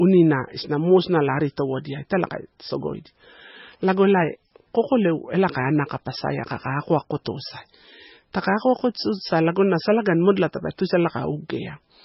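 From start to finish the speech is band-limited, with nothing above about 5.6 kHz, and carries heavy watery, swirling artefacts, with smeared consonant onsets and chirpy sibilants. The likely cause is MP3 compression at a very low bitrate, which fits something near 17 kbps. Starved of bits, the encoder cut the treble at a fixed frequency and discarded weaker spectral lines, which flicker on and off between frames and produce the swirl.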